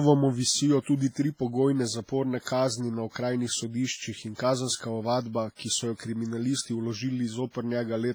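WMA compression runs through the whole clip: the speech rings and sounds washy, with a hiss that swells and fades with the signal and weaker detail dropped out entirely. The cause is likely a Windows Media Audio transform encoder pushed hard. Its quantisation noise smears across long blocks, and quiet spectral lines are discarded, which fits a low bitrate of around 24 kbps and accounts for how heavy the damage is.

Pre-echo appears three times, from 2.41 to 2.46 s just before "kazni na", from 5.55 to 5.59 s, and from 7.50 to 7.55 s. A short hiss of about 40 to 50 ms (48, 39 and 42 ms) leads into each sharp onset, and the attack itself sounds softened and smeared. Each onset arrives late in a transform block. The noise sized for the loud part is spread evenly over the whole block, so it also fills the quiet stretch just before the onset.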